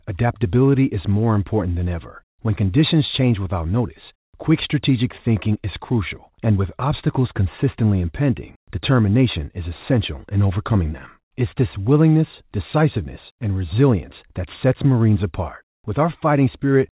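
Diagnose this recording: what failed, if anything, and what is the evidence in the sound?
Nothing failed here: the speech comes through a narrowband call path that carries nothing above 4 kHz, and the sound shows no evidence of a fault.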